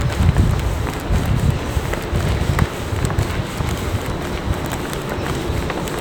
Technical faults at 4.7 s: none

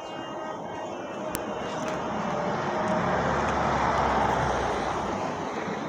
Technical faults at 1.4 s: file header played as audio

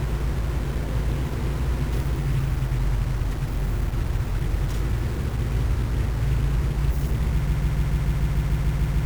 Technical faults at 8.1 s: stuck bit; broken-record loop

